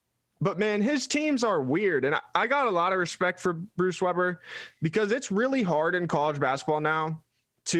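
No technical faults are audible in this speech.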